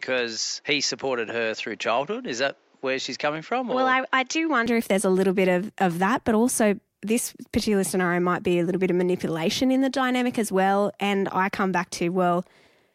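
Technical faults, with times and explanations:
0.00 to 4.66 s, input switched to a poorer device. The speech sounds dull and boxy, with nothing above 7.6 kHz, and a faint extra background noise sits well below it. At 4.66 s the sound opens up again just before "if there's a little". There is no gap at the change and no real jump in loudness. The recording likely began on a lower-grade microphone or headset input and then moved to a wider-band one, changing tone and noise.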